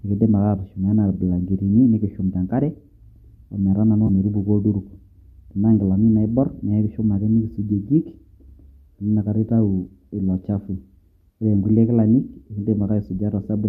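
AAC frame loss with concealment occurs at 4.07 to 4.10 s in this speech. About 20 ms of audio went missing, which fits two lost 10 ms frames from what is likely a low-delay AAC stream at 64 kbps. The decoder covered the hole by reusing the last good spectrum with its phases disturbed, so instead of a dropout there is a brief smeared, noisy, phasey blur before normal decoding resumes.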